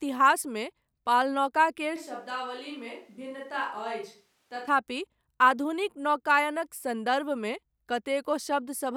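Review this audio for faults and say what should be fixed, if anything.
At 1.97 s the speech turns suddenly roomy and hollow, and it snaps back at 4.67 s. Across that stretch the bass thins out and the level falls by about 10 dB. Background noise becomes more noticeable, sitting roughly 35 dB below the speech. The abrupt change at both edges likely reflects a switch to a distant microphone, where the close mic's signal dropped out and a farther pickup carried the audio. That section should be replaced or repaired. To prevent it, monitor the close mic during recording and secure its connection and transmitter.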